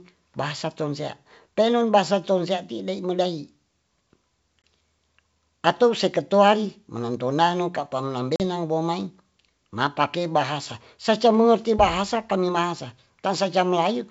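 Packet loss on the ADPCM call interrupts the sound twice. At 4.62 to 4.64 s a 20 ms gap, about one packet's worth, is filled with silence. At 8.36 to 8.41 s a 40 ms gap, about two packets, does the same. Each hole has hard edges. After each gap the decoder's adaptive predictor and step size no longer match the sender's. The speech therefore returns slightly distorted, and settles within some tens of milliseconds. Outside the gaps the wideband G.722 coding keeps the speech clear.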